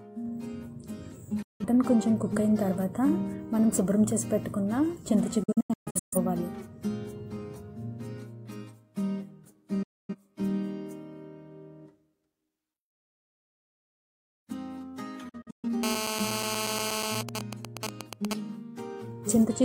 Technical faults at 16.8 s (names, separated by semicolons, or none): GSM phone buzz